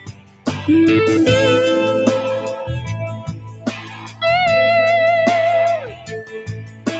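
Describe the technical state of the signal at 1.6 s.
At 1.6 s you're hearing the noise suppressor applied to music or sounds, and it's active across the whole clip, not just there. A suppressor built for speech is treating the sustained parts and the ambience as noise, so onsets come through while anything held gets pulled down. The level swings by something like 15 dB, which makes the sound pump and thin out. The top of the band stops near 8 kHz, which fits a wideband Opus call path.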